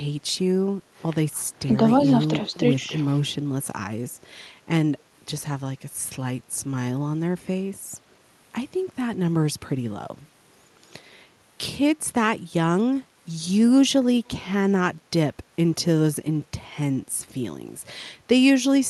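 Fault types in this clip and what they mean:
Background gated by the echo canceller: from 1.32 to 1.43 s the room sound is pushed down by about 7 dB for roughly 100 ms while the far end plays, then recovers. A waveform shows a brief notch in the noise floor; a spectrogram shows a short, full-band darker gap.
Speech suppressed in double talk: between 2.81 and 2.93 s the speech sags by about 5 dB for around a tenth of a second, likely because both sides spoke together and the canceller ducked everything. The waveform envelope dips briefly; the spectrogram shows that slice dimmed across the band.
Echo leak: at 14.25 to 14.29 s a very faint copy of the speech, around 40 dB down, returns 111 ms late, likely from loudspeaker pickup that escaped cancellation. It barely shows on the waveform; a spectrogram reveals a ghostly repeat of the preceding harmonic pattern, shifted in time.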